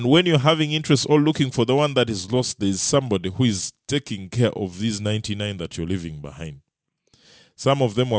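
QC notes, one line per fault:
Throughout, aliasing: the s and sh sounds come out gritty and metallic, and the spectrum runs hard right up to a wall at 8 kHz. That edge fits a drop to a 16 kHz sample rate with no low-pass filter first. Everything above 8 kHz has folded back down onto wrong, unrelated frequencies. The folded junk sits roughly 20 dB under the speech.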